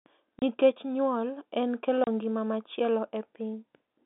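At 0.39 s, before "nyuol en kelo ngima", and at 2.04 s, between "nyuol en kelo" and "ngima machielo", the speech stops dead for 30 ms: packet loss filled with silence. Each gap fits one lost packet. Unlike concealment, nothing is patched in, and the gaps have hard edges.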